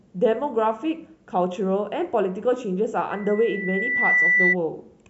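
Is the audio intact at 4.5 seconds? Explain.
No. At 4.5 seconds a steady 2 kHz tone is sounding over the speech, somewhat louder than it. This is loudspeaker feedback squeal, running from 3.11 to 4.56 s; it swells over about a second before settling into a squeal. The microphone is hearing the loudspeaker it drives, and at 2 kHz the gain around that loop exceeds one, so the tone keeps feeding itself until the amplifier limits it or the loop is broken.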